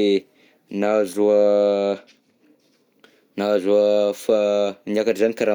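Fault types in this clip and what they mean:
No technical faults are audible.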